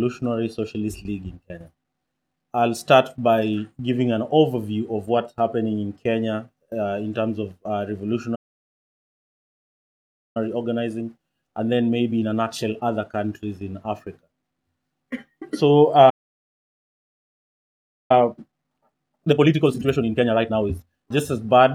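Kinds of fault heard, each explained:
Playback stall: the sound cuts out mid-flow and stays silent for about 2 s, once from 8.35 to 10.37 s and again from 16.09 to 18.11 s. That pattern points to the player likely running dry of data or having its thread blocked before recovering.
Time-compressed catch-up: right after each stall the player trims its backlog by splicing out small slices, so things sound rushed at normal pitch. It runs 1.1 times fast from 10.37 to 13.37 s, then a more obvious 1.5 times from 18.11 to 21.11 s.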